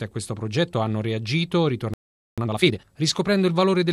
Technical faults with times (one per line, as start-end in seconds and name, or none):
1.94-2.38 playback stall
2.38-2.82 time-compressed catch-up